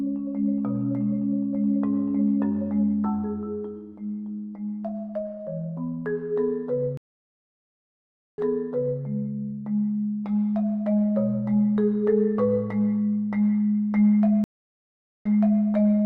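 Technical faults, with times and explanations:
6.97–9.02 s and 14.44–15.63 s, stream reconnect: the connection dropped and the player went silent for about 1.4 s and 0.8 s. A fresh decoder then restarted mid-stream, and the server's resent burst made the audio resume 0.64 s and 0.38 s earlier, repeating material.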